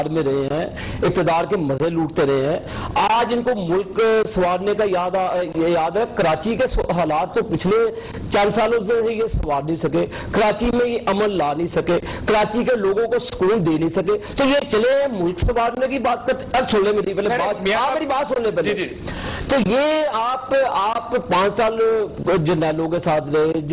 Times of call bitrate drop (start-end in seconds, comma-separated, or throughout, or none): none